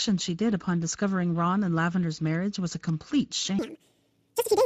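From the start the speech carries Speex codec damage that is plainly audible. This CELP coder has too few bits for the excitation signal here, so the speech sounds hoarse and grainy, with a noisy buzz under the voiced parts. What sits above 4 kHz is a shaped, noise-like fill rather than real detail. The amount of degradation points to a mid-range setting around 16.8 kbps.

From 3.59 s to the end at 4.65 s, the section plays at the wrong speed, running 1.87 times faster than it should. Pitch and tempo rise together, so the voice jumps up by roughly ten semitones and sounds hurried and chipmunk-like. The change is abrupt rather than gradual. The likely cause is a player or editor handling this stretch against the wrong clock.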